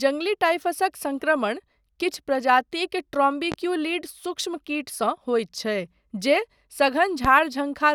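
A sudden voltage step or pulse, likely from a plug, switch, static discharge or driver glitch, is added to the speech signal, and the downstream circuits shape it into a brief pulse. The result is a loud pop from 3.52 to 3.56 s, peaking about 10 dB above the speech, and a stronger one from 7.25 to 7.28 s, about 15 dB above it. Each is a single sharp pop, and the speech continues underneath.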